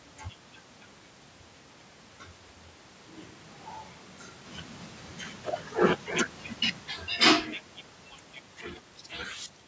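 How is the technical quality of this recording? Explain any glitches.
One glitch stands out. Switch to a distant microphone, 2.53 to 4.44 s: the close mic likely dropped out for a farther one, so the speech turns suddenly hollow, roomy and about 10 dB quieter.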